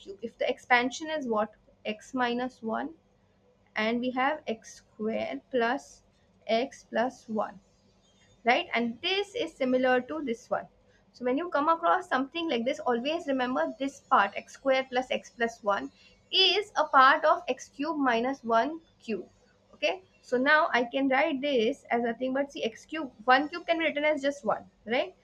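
A noise suppressor applied to music or sounds runs throughout, treating sustained material as noise and pumping gain by around 20 dB; the waveform envelope visibly breathes. Sound cut by the noise suppressor follows from 0.0 to 11.22 s, 13.91 to 20.32 s, 21.75 to 23.28 s and 24.59 s to the end. Held tones and decays sink by up to about 19 dB (about 16 dB in the third stretch), showing as spectrogram energy that fades early behind intact transients.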